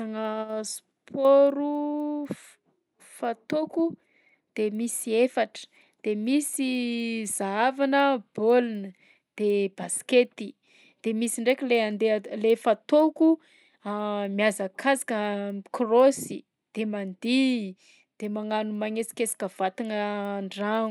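From start to finish the speech carries a regular tick at 4 Hz, one every 250 ms, present only while there is signal. This is the signature of a resampler restarted on every block: each block was converted on its own, which points to an upsampling step such as 24 kHz to 48 kHz. At each block edge the filter lacked the neighbouring samples, leaving a small error at every seam.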